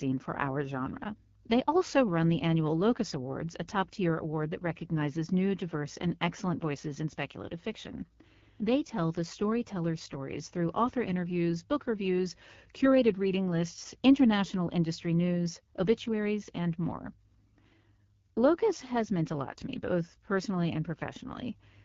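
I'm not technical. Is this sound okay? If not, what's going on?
No, the speech sounds rough and raspy from start to finish. That is the AMR wideband (HD Voice) codec, a phone-call compressor, squeezed to a low setting and rebuilding the voice crudely.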